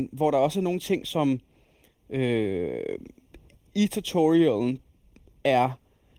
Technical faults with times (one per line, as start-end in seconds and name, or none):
0.00-6.18 channel delay (comb filtering)